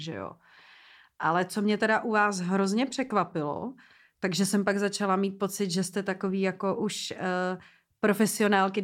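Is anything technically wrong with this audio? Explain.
No, nothing in this speech recording stands out as a technical fault.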